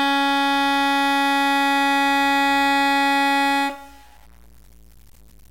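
From start to finish the music carries grainy distortion that tracks the signal: quiet passages turn gritty and decays drop to silence or sputter rather than fading cleanly. This is likely low bit depth without dither, consistent with truncation to about 7 bits, leaving error roughly 35 dB below the music.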